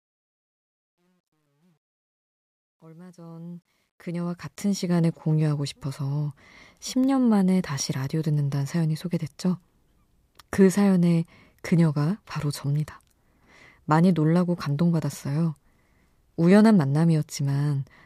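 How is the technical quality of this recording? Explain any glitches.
The opening fade-in has one glitch. Truncation distortion on a fade runs from 0 to 5.05 s and is worst until 3.21 s. Without dither, the quiet start collapses into coarse steps, which fits an 11-bit stage. It sounds gritty, and shows as stair-stepped waveform and broadband spectrogram hash.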